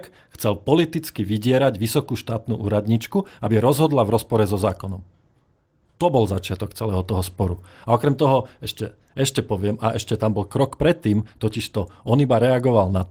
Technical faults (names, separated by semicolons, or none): lost packet rebuilt from error correction